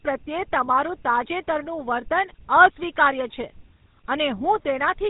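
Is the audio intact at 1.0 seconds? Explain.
No. At 1.0 seconds, as through the whole clip, the speech has passed through the GSM full-rate codec. The codec models the vocal tract as a filter and rebuilds the excitation from regularly spaced pulses, discarding two of every three excitation samples, at a data rate consistent with its 13 kbps. Plainly audible here, this gives the speech a buzzy, gravelly roughness, and everything above 3.8 kHz is missing, leaving it dull and narrow.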